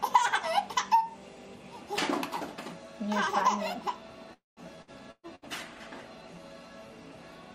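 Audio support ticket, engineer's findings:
Call audio freeze, 4.33–4.60 s: last sound stretched into a fading buzz or hiss, then about 160 ms of silence. Likely cause is delayed packets draining the jitter buffer. Playback resumes where it stopped, adding about 0.23 s of delay. Nothing skipped, unlike loss.

Burst of packet loss at 4.82–4.90 s, 5.11–5.26 s and 5.35–5.45 s: brief held buzz/hiss fading down, then audio picks up further on. About 60 ms, 120 ms (with a 40 ms dropout) and 60 ms missing. Content gone rather than delayed, which distinguishes it from the freeze.

Call bitrate drop, 5.1 s to end: sound turns muffled and rough, top end cut off. Fits the encoder falling from around 96 to 24 kbps after a bandwidth estimate drop, held at the floor for about 2.1 s. Sustained tonal degradation, with no gaps or timing shifts.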